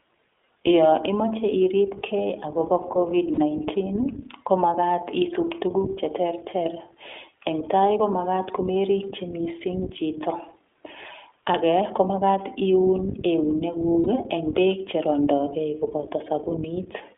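A speech recording run through the iLBC codec, and the damage is plainly audible. The band is squeezed to roughly 300 Hz to 3.5 kHz, and the voice has that slightly rough, synthetic edge you get when each 20 ms frame is coded on its own, which fits iLBC's 15.2 kbps mode. There are also lost iLBC frames in two places. At 3.34 to 3.39 s, right after "imoche iripke agobo kovid", about 40 ms drops out, which points to two missing frames. At 14.04 to 14.08 s, just before "eng beek cherondogei", a gap points to a single lost frame. In both spots the decoder repeats the last pitch cycle mixed with noise, so you hear a brief buzzy held vowel, and the voice snaps back almost immediately.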